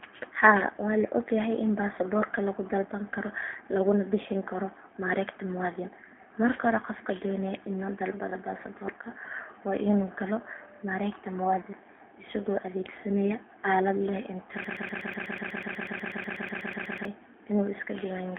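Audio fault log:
throughout: G.729 codec. The sound is confined to a telephone band of roughly 250 Hz to 3.4 kHz, with nothing above 3.5 kHz. Speech is rebuilt from a filter model and a few pulses per frame, so it sounds plainly rough and synthetic. This fits 8 kbit/s G.729A.
14.64 to 17.05 s: broken-record loop. A fragment of about 123 ms repeats exactly, back to back, roughly twenty times. The stream likely stalled and kept resending its last held fragment, so the audio that belonged in that span is lost.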